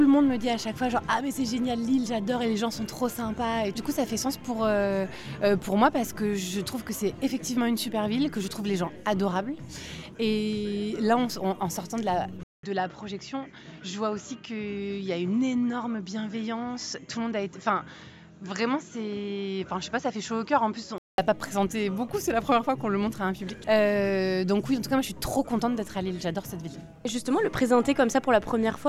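At 12.43 s the sound drops out for 200 ms. It returns duller and boxier, with nothing above 7.6 kHz. It is a little quieter, over faint new background noise. The input was likely switched to a poorer device. Full bandwidth returns at 21.18 s.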